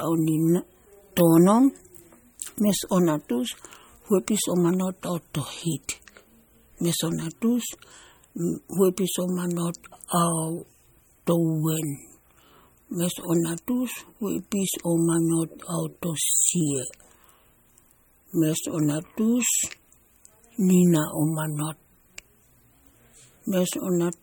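From start to finish the speech has a watery, swirling quality, with metallic chirps flickering on the s sounds and consonant attacks smeared, and nothing comes through above 18.7 kHz. This is likely MP3 compression at a low bitrate, which fits roughly 46 kbps. Short of bits, the encoder cuts the treble at a fixed point and zeroes weaker frequency lines, so they switch on and off from frame to frame.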